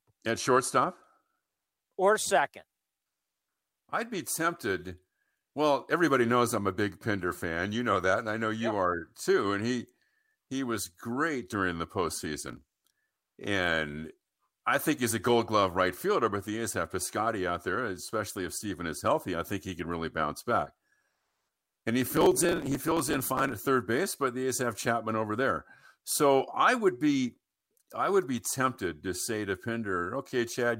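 The processor fell behind on its very short audio buffers, well under a millisecond each, and missed deadline after deadline, producing processor overload crackle. Each missed buffer was skipped, leaving a tiny hard-edged gap. From 12.48 to 12.95 s the gaps cluster into a brief gritty crackle riding on the speech. From 22.06 to 23.58 s a longer run, suggesting something like a hundred misses, tears through the sound until it clears just before "third base but the".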